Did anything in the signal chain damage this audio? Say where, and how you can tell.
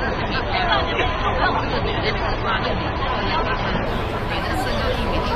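Yes. From 0 to 3.86 s the audio is dull, with nothing above 6.3 kHz, and codec artefacts are stronger; then the quality jumps suddenly without a gap. This is an adaptive stream starting at a low bitrate: the player began on a low-rate AAC version, roughly 27 kbit/s, then stepped up to one near 96 kbit/s once it had measured the network.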